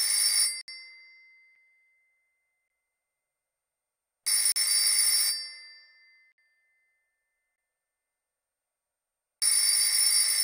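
At 0.61 to 0.68 s, 1.55 s, 2.68 to 2.70 s, 4.52 to 4.56 s, 6.32 to 6.38 s, 7.56 to 7.58 s and 9.40 to 9.42 s the sound drops into blocks of digital silence, from 6 to 68 ms long, likely where the output buffer went unfilled. The brief 1.55 s gap registers as a tick, the longer ones as holes. Unlike a fade or concealed loss, level falls straight to silence and back, with nothing smeared or repeated.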